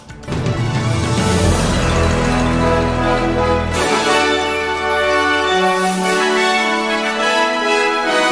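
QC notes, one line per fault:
No technical faults are present in the signal.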